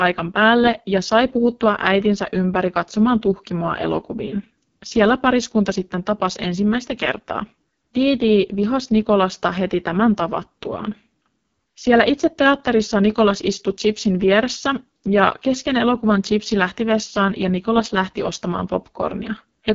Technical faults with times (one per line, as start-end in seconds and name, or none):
0.00-19.75 AMR wideband (HD Voice) codec